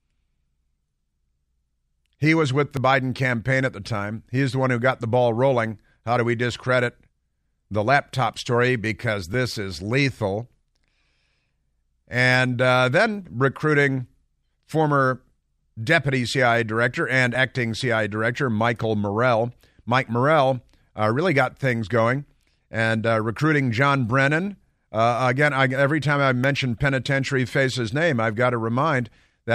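At 2.77 s, 9.34 s and 17.35 s the speech jumps. Nothing is silent. The audio just skips forward and the two sides butt together. Each is likely a dropped buffer (overrun), losing about 10 ms, 10 ms, then about 30 ms.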